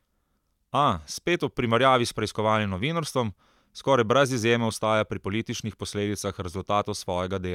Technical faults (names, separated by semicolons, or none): none